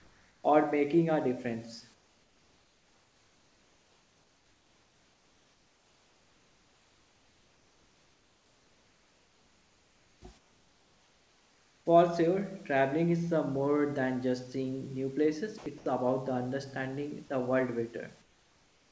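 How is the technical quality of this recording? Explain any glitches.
The recording carries two related transmission faults on top of a call path with nothing above 8 kHz, which fits a wideband codec such as G.722.

Comfort noise in place of the background, from 0 to 0.44 s, 1.94 to 10.22 s, 10.38 to 11.86 s and 18.22 to 18.91 s: the sender likely paused transmission during silence, so the receiver synthesised a smooth, featureless hiss about 4 to 5 dB quieter than the real room noise.

Sound dropped by the voice detector, at 15.58 to 15.66 s and 15.78 to 15.86 s: the detector likely mistook speech for background, so two 80 ms pieces are swapped for steady noise.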